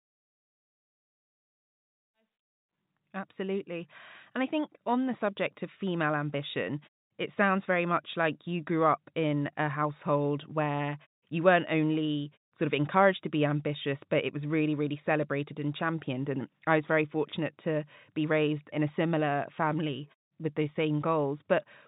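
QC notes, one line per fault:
Nothing to flag here; the speech eases in over its first few seconds, carries the narrowed, phone-like sound of a call line, and drops quietly away in the gaps, all of which is just how it's meant to come across.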